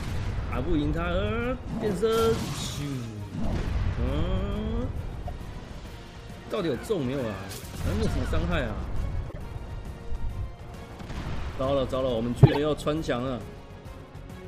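Corrupt frame decoded at 5.27–5.29, 8.03–8.06, 9.30–9.38 and 12.43–12.58 s. Damaged compressed frames were played anyway, so brief chirps or noise bursts appear instead of silence. The last and loudest burst peaks near about -5 dBFS.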